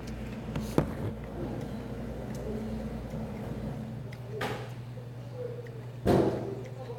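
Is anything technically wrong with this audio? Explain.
No, nothing technically wrong can be heard anywhere in this audio.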